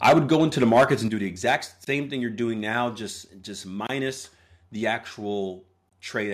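The opening syllables crackle harshly from 0.04 to 0.36 s and again from 0.62 to 0.94 s, with the loudest peaks squared off, about 11 dB and then about 8 dB beyond full scale. This microphone overload likely comes from input volume set so high that around a few percent of samples hit the converter's ceiling. Inside the first burst, at 0.09 s, the whole level drops abruptly by 2 dB, and at 1.08 s it falls again by 6 dB, with voice and background sinking together. That is the microphone volume stepped down, likely the call software reacting to the distorted peaks by cutting input gain in single jumps. A milder crunch follows from 1.48 to 1.55 s, right after "do the", around 3 dB over with only a small share of samples clipped. Short hard-edged holes of about 23 ms then appear at 1.85 s, just before "same thing you're doing", at 3.87 s, after "doing now just just", and at 5.89 s. They fall every 2 s. 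This is a gap between chunks: the audio is handled in 2-second pieces, and a sliver of silence sits at each join, interrupting the sound without removing any. One more gain step of 3 dB lands at 2.1 s.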